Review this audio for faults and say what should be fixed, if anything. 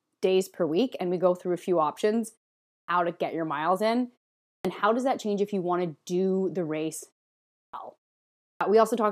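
Clipped start after a pause occurs at 2.71 s (after "through a few options"), 4.47 s (after "get your miles in"), 7.56 s (after "to do the race") and 8.45 s. Each time, the output device dozed through a pause of 0.38 to 0.55 s and was still waking when speech resumed. About 0.17 s of onset was lost at the first three and 0.16 s at the last, so speech bursts in abruptly. The pauses themselves go quiet and recover in time, which is harmless; the fault here is that speech arrives before the device has woken. Keep the output device awake through silences, for example by disabling its idle power-saving or feeding it a continuous stream.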